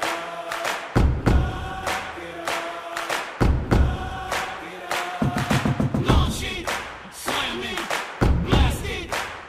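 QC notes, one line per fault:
4.71–6.40 s, drift correction step: the sound abruptly plays 5.5% fast, pitch rising 93 cents (nearly a semitone), then snaps back, likely a clock-matching resampler changing rate in one jump. The spectrogram shows every harmonic stepping upward together, then dropping at once.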